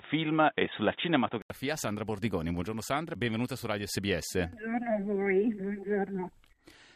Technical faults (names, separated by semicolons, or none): input switched to a poorer device